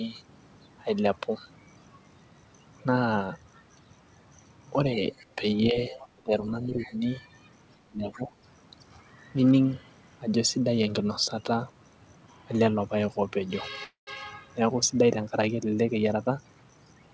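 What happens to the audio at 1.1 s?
Nothing goes wrong at 1.1 s: the speech carries on intact through that moment, with only the ordinary band limit of the call path, which leaves nothing above 8 kHz.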